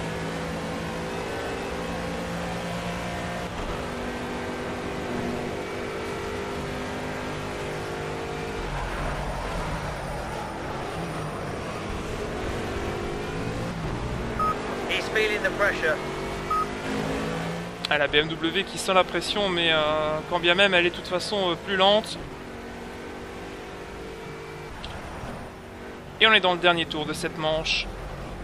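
At 16.07 s a repeated buffer occurs: fresh audio arrived late, so a piece of about 5 ms played once more with hard joins. Being so short, it sounds like a click rather than a stutter, and unlike a dropout the sound briefly repeats instead of cutting to silence.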